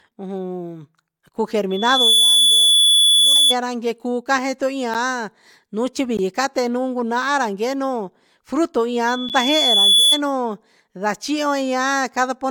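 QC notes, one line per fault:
1.70–3.56 s and 9.07–10.21 s, loudspeaker feedback squeal: a 3.4 kHz tone swells over roughly 0.4 s, then about a second, to around 10 dB above the speech as the mic-speaker loop self-oscillates.
3.35 s, damaged data in a compressed stream: a brief glitch inside the first squeal as the decoder misreads corrupt frames and resyncs at the next header.
4.94, 6.17 and 9.29 s, block of digital silence: 10 to 17 ms gaps, the 10 ms ones heard as ticks or dips, just before "case nuun" at 6.17 s, where output buffers likely went unfilled and the sound cuts abruptly to silence.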